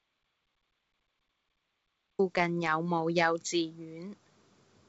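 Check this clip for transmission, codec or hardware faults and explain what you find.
There's one real problem: an audio dropout to silence that's already under way when the clip begins and lasts until 2.19 s. It's dead digital silence with no room tone, so the input was likely lost while the recorder kept writing zeros. The speech then starts mid-flow. The G.722 wideband telephone coding isn't a fault; you can just hear it in the band-limit, with nothing above about 7.7 kHz.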